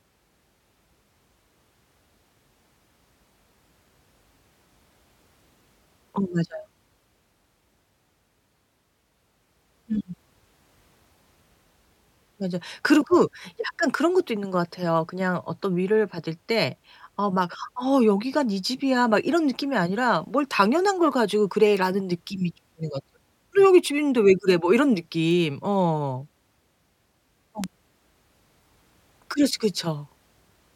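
Bit error spikes tick sharply at 21.77, 24.50, 25.31 and 27.64 s. Flipped bits jolt one or a few samples, peaking around -8 to -20 dBFS.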